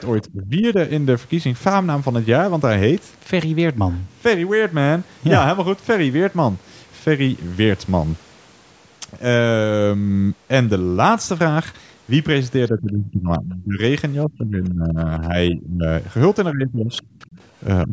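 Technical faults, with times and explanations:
0.07–0.32 s and 16.93–17.36 s, other side's voice leaking through: a faint second voice sits about 25 to 30 dB under the speech. The likely cause is loudspeaker echo the canceller missed.
0.32–0.78 s, 12.7–13.79 s, 14.25–15.87 s, 16.52–17.03 s, 17.87–17.93 s, speech suppressed in double talk: the speech dips by roughly 15 to 25 dB in pieces. This is likely the echo canceller turning everything down while both sides talked at once.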